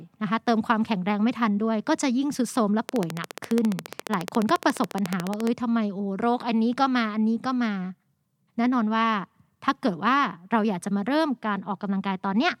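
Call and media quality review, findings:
Train of clicks, 2.89–5.48 s. Regular ticking at 14.3 clicks/s, some forty in all, peaks about 15 dB above the speech, audible over pauses too. Likely cause: electrical interference or a faulty connection or power supply injecting repeated pulses. Spectrogram: evenly spaced thin vertical broadband lines. Waveform: similar sharp spikes, evenly spaced, standing above the speech envelope.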